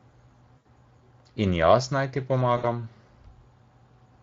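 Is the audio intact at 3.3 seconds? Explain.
No. At 3.3 seconds, as everywhere else in the clip, the speech is carrying Speex codec damage. Speex is a CELP coder: it models the vocal tract with a filter and spends a limited bit budget describing the excitation that drives it, so whatever that excitation can't capture comes out as coding distortion. The damage is plainly audible, with a grainy, processed edge on the speech, and the sound points to a rate of roughly 20 kbps.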